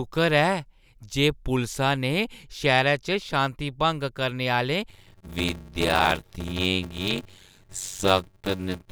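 From 4.89 s to the end of the speech, a block size mismatch (padded) sets in. One stage hands over shorter blocks than the next stage reads. Each block is topped up with zeros. That puts a tiny gap in every block. The gaps repeat at 93.8 Hz and form a steady buzz under the speech. The speech also runs slow, at 0.625 times normal speed. The figures fit a 512-sample read block.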